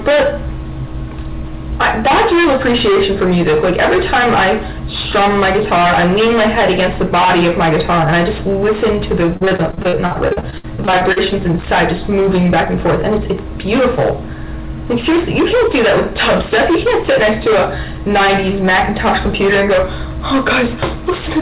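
Hard clipping runs through the whole clip. The level is pushed about 20 dB past what the chain can carry, so roughly a fifth of the samples get sliced flat. That gives a constant harsh fuzz on everything loud, with extra harmonics piling up wherever the band allows, and nothing above 4 kHz, which fits a narrowband G.711-style call path.

From 9.26 to 11.41 s there's repeated packet loss with a robotic sound. A couple of dozen short dropouts, the longest about 61 ms, are each patched by stretching the previous sound, so roughly a quarter of that stretch comes out choppy.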